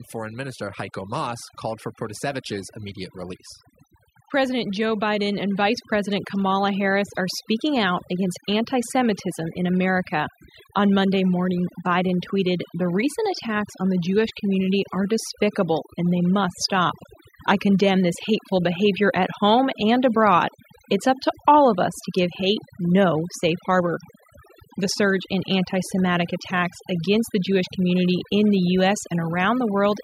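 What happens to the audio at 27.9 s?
At 27.9 s the speech carries overdone noise removal, present across the whole clip. The noise reduction is set so aggressively that frequency bands near its noise estimate are pulled down or muted, taking quiet speech detail with them. The background drops and breaks up into twinkling specks.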